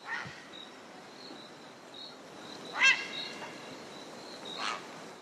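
No technical faults can be heard anywhere in this recording.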